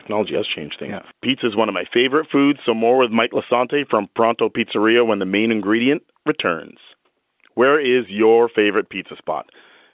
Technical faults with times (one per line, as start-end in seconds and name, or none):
none